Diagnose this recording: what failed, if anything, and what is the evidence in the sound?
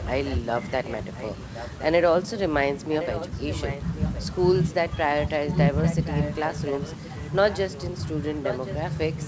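An echo leak in call processing: a delayed copy of the speech trails it by 1.07 s at 0.00–1.83, 2.91–4.22, 5.32–7.84 and 8.43–9.28 s, faint first, then louder. The likely cause is a far-end echo canceller passing residue. Its fixed, discrete lag distinguishes it from smeared room reverberation.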